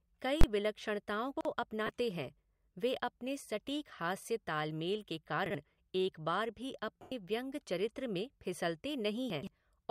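At 0.41 s a sharp, very loud bang cuts through the speech for about 23 ms. It is an invalid numbers at full scale fault: a calculation produced infinite or invalid values, and the output was forced to the largest positive or negative level for one whole processing block. The length fits a 1024-sample block, and the block is short enough that the whole event collapses into a single crack.

From 1.37 to 1.45 s the speech briefly jumbles. These are chunks out of order. A chunk of about 43 ms was written one slot late, so it plays after material that should have followed it. Nothing is missing, but the reordering leaves three abrupt joins. The same stumble returns from 5.46 to 5.55 s.

At 1.86 s there is a brief hissy smear of about 23 ms where the tone of the speech should be. These are lost LE Audio frames: the LC3 decoder filled the gap by reusing the last spectrum with random signs. The duration points to three lost 7.5 ms frames. 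From 7.02 to 7.12 s a longer loss of about 98 ms produces the same noisy smear, which then fades as the concealment dies away.

From 9.30 to 9.47 s the chunks out of order fault returns in a longer form. This time the chunk arrives three slots late, so a larger stretch of sound is scrambled, again with hard joins.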